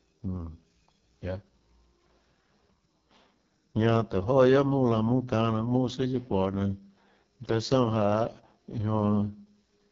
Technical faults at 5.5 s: AMR wideband (HD Voice) codec

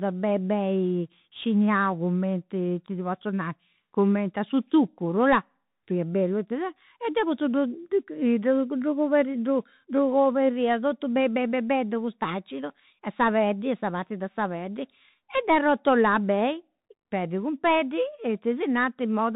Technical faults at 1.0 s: Bluetooth CVSD headset codec

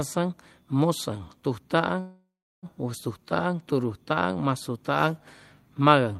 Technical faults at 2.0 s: call audio freeze

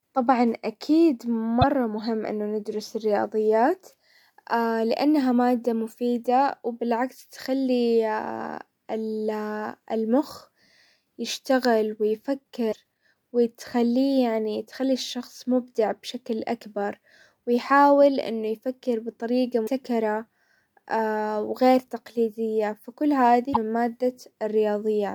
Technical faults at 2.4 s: none

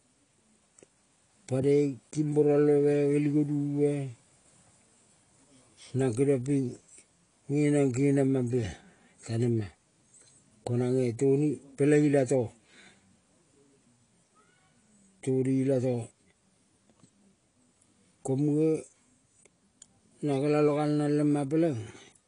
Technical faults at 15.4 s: AAC compression

